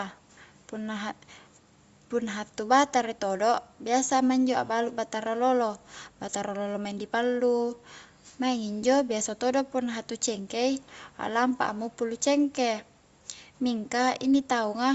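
No technical faults are audible in this speech recording.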